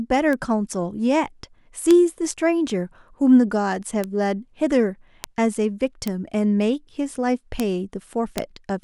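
Seven bit error spikes interrupt the speech, at 0.33, 1.91, 4.04, 5.24, 6.08, 7.60 and 8.38 s. Each one is a flipped bit in the stored or transmitted data. A sample value jumps by a power of two, then snaps straight back. Each spike lasts only a sample or a few. The first peaks at about -11 dBFS, the rest at about -5 dBFS. Every one is a single sharp, broadband tick with no relation to the speech around it.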